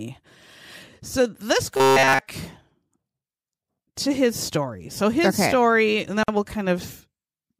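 From 1.77 to 2.20 s the speech takes on robotic sound from repeated short buffers: a rigid metallic buzz at 134 Hz runs through the whole stretch. The likely cause is the last 7.5 ms being looped while real audio is skipped. Unlike an ordinary dropout, sound never stops, and the fixed buzz pitch gives it away.

At 6.23 to 6.28 s a silence of 49.5 ms opens, a gap at a join of encoded pieces, where encoder start delay and end padding were left in. It differs from packet loss because its edges are smeared and the speech resumes exactly where it stopped.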